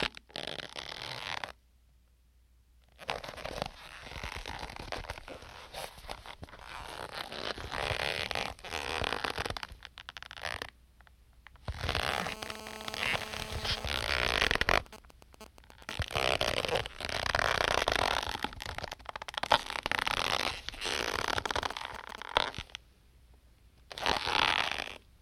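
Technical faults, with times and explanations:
12.11 to 13.85 s, GSM phone buzz: a hard, raspy buzz at about 217 Hz, dense with harmonics and about 12 dB below the audio, unrelated to it. A nearby 2G phone in a call transmits radio bursts 217 times a second, which the audio circuitry rectifies into this steady tone.
13.90 to 16.19 s and 21.00 to 22.20 s, GSM signalling bursts: first even ticks with a longer 217 Hz buzz twice a second, then a galloping dit-dit-dit of short 217 Hz buzzes, roughly 10 dB down. The phone sends only short groups of bursts, first while its user is silent in the call, then while signalling, and the circuit rectifies each group.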